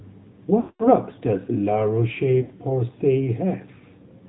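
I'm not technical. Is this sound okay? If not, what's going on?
No, it isn't quite right. The whole clip has gone through the AMR narrowband mobile codec, the old phone-network squeeze. Everything above 4 kHz is cut off, so the voice sounds muffled and boxy, with a noticeably buzzy, artificial edge throughout.

There are also lost AMR speech frames, dropouts where chunks of the call didn't arrive. From 0.60 to 0.88 s about a fifth of a second goes missing, so the phone guesses, stretching the last sound and fading it away. A shorter gap at 2.42 to 2.52 s is stretched out briefly in the same way.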